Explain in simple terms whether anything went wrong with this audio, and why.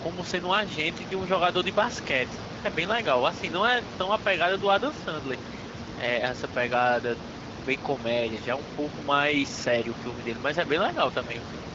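Nothing went wrong with this audio, because no faults can be heard in it.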